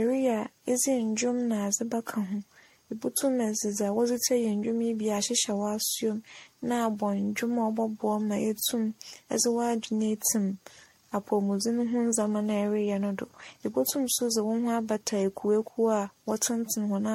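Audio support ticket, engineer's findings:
Generation loss, whole clip. Likely cause: audio re-encoded repeatedly through a lossy MP3 chain, roughly ten passes, each pointing to around 62 kbit/s. Each pass requantises on a shifted frame grid, so artefacts compound. Result: swirly, hollow, smeared speech, blurred consonant attacks, no content above 16.5 kHz.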